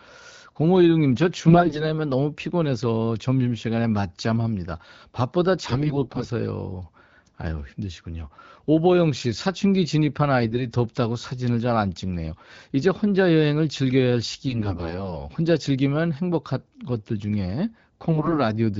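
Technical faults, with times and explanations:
1.47–1.85 s, 5.65–6.28 s, 10.42–10.66 s, 14.46–15.16 s and 18.09–18.39 s: AMR bit errors. The voice goes hoarse, scratchy and gargly but holds its pitch and level. That points to roughly one bit in ten (about 7% in the 10.42–10.66 s burst) getting flipped in the weakly protected parts of the frames. The excitation pulses land in the wrong places and the fine pitch, gain and spectral detail drift, while the clean HD Voice sound around these bursts holds up.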